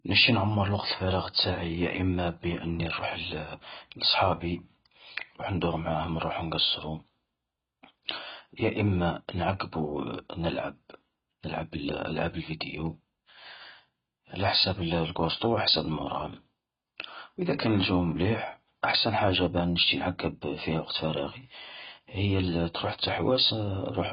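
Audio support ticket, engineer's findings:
Speech dull and band-limited for the whole clip, nothing above about 5.1 kHz. Sibilants fizzy and smeared, sustained vowels warbling. Likely AAC compression, AAC-LC at a very low rate, and the sound fits roughly 16 kbps. Encoder's dropped the cut-off and is starving bands, leaving holes or noise-filling them. Heavy damage, so re-encode at a higher bitrate or grab the source.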